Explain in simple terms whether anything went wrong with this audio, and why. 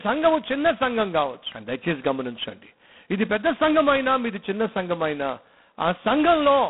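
G.726 ADPCM runs through the whole recording. It stores only rough guesses of how the sound changes, so the speech carries a harsh, rasping hiss that rises and falls with it, which fits the codec's lowest setting. Nothing above 3.9 kHz survives.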